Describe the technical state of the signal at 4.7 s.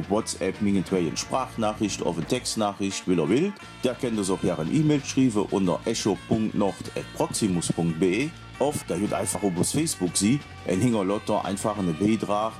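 At 4.7 s the signal is intact, with no audible fault at that moment.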